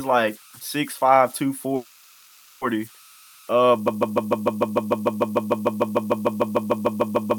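From the start, faint converter idle tones run under the speech. A delta-sigma converter without dither falls into repeating bit patterns when its input is small. Here that makes a thin whistle near 1.5 kHz. It sits about 29 dB below the speech. It is clearest in the pauses. Under quiet passages it turns into a grainy texture.

At 1.75 s a call audio freeze begins and lasts until 2.64 s. For 0.86 s the last sound is drawn out as a fading buzz. It never drops to true silence. The likely cause is packets held up in transit, leaving the jitter buffer empty. When the audio resumes, nothing is lost. It simply picks up where it stopped, about 0.86 s later than it should.

At 3.88 s a broken-record loop starts and runs to the end. A fragment of about 0.15 s repeats exactly, back to back. It comes round roughly two dozen times. The likely cause is a stalled player, encoder or stream that kept resending the last piece it held. 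All the speech that should have followed is gone.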